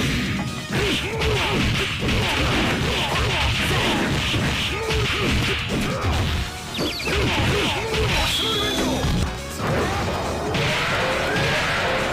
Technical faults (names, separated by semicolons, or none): damaged data in a compressed stream